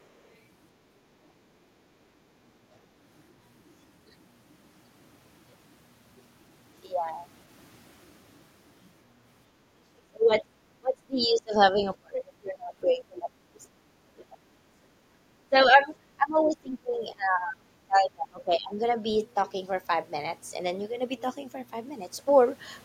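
Other side's voice leaking through, from 0.0 to 0.35 s: a very faint second voice sits far below the talker, likely because the echo canceller did not fully remove the loudspeaker signal from the microphone pickup, so a remnant of the far end slips through.

Speech suppressed in double talk, at 10.05–10.55, 10.79–11.76, 12.0–13.84, 14.13–14.37, 15.42–15.91, 16.16–17.71 and 17.87–18.8 s: the talker's speech repeatedly sinks, by roughly 20 to 30 dB at worst, likely because both sides spoke together and the canceller turned everything down.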